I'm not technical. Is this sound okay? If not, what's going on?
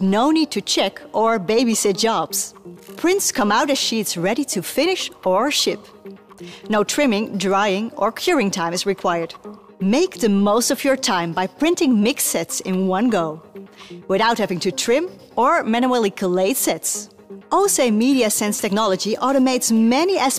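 Yes, this sound is okay, and nothing is going on that needs fixing.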